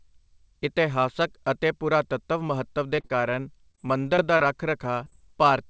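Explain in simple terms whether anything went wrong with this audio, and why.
Yes, there's a problem here: repeated packet loss (robotic sound), in two patches of this speech, from 2.96 to 3.36 s and again from 3.71 to 5.14 s. Bits of the audio went missing in transit, and each hole got patched by stretching out the last bit of sound, so you hear a choppy stutter with pieces missing. The first patch is the rougher one, with almost a third of it filled in. The call line itself stops at 8 kHz, which just sounds a bit narrow.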